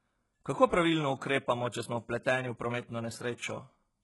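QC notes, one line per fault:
Throughout: HE-AAC compression, likely. The speech has a gritty, metallic treble with lispy s sounds, which fits a very low bitrate near 12 kbps, where the top band is rebuilt from copied lower bands. A spectrogram shows smeared, repeated-looking upper bands ending abruptly at 11.5 kHz.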